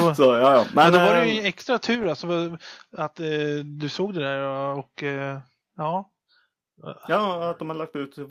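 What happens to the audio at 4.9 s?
Nothing goes wrong at 4.9 s: the speech continues cleanly through that moment, with no dropout, click, distortion or other fault to be heard.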